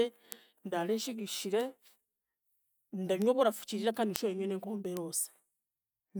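Speech, marked by five bit error spikes, sharp broadband ticks at 0.32 s (just before "ndaare nshigishire"), 1.61 s (just after it), 3.22 s, 4.16 s (before "nshube nywe n'enkombe") and 4.97 s. Each sounds like a flipped bit briefly throwing one or a few samples off by a power of two.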